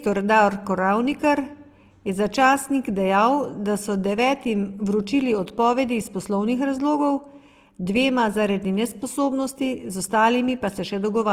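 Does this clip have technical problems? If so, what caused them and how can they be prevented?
Yes. Opus compression affects the whole speech clip. The audio sounds grainy, rough and plainly noisy while keeping its full bandwidth, which points to Opus in its music (CELT) mode at around 24 kbps. The encoder likely ran short of bits and filled the starved bands with folded copies of lower bands or with noise. Encoding at a higher bitrate, or choosing Opus settings suited to speech, would prevent this.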